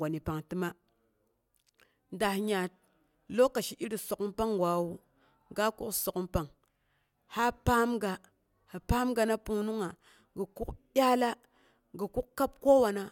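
No faults can be heard.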